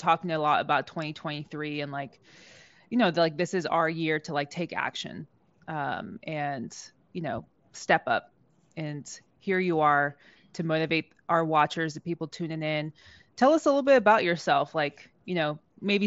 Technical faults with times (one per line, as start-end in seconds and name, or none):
none